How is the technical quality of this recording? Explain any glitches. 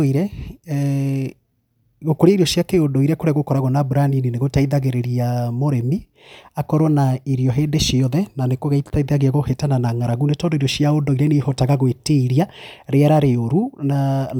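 The technical quality of this recording holds up, with no glitches to explain.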